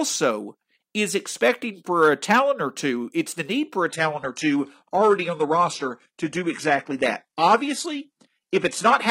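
At 3.90 s, right after "the need for a", the speech drops abruptly to a poorer rendition and stays there until the end: an adaptive stream at a lower bitrate. Nothing is heard above 11.8 kHz, so the top end goes dull and codec artefacts rise, which fits a slowed connection forcing a switch from a 96 kbit/s AAC stream to a 16 kbit/s HE-AAC one. Unlike a dropout, the change is sudden but leaves no gap.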